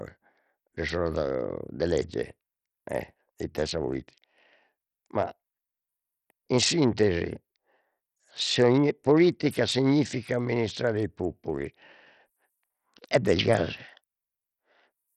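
From start to finish the speech sounds gritty, with a fine granular noise clinging to every syllable and a treble that flickers in and out, with nothing at all above 14.2 kHz. The damage is heavy and points to a very low bitrate, around 64 kbps. The likely cause is Bluetooth SBC compression: its coarse sub-band quantisation starves the upper bands of bits, leaving quantisation grit and aliasing across the rest of the spectrum.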